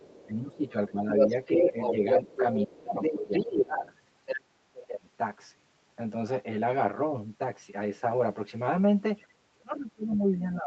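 The whole thing has a hollow, phasey quality from channel delay (comb filtering). One channel runs roughly 10 ms late, so summing to mono notches out evenly spaced frequencies starting around 50 Hz.

From 0 to 0.26 s there's a faint bit of the other side's voice leaking through, well under the talker. It's likely loudspeaker echo that the canceller didn't fully remove.

Then from 0.27 to 2.03 s the speech is suppressed in double talk. The talker dips by up to about 15 dB, likely because the echo canceller ducked everything while both sides spoke. The leak comes back from 1.17 to 2.65 s, this time a bit louder than the talker.

From 2.66 to 3.85 s there's more suppression, dropping as much as about 25 dB. Leakage overlaps it from 3.02 to 4.39 s at roughly the talker's level.

From 4.4 to 5.07 s the voice gets chopped down again, by up to about 35 dB.

Finally, from 9.28 s to the end, suppression pulls the talker down by up to about 30 dB. 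A faint scrap of leakage slips through between 10.12 and 10.18 s.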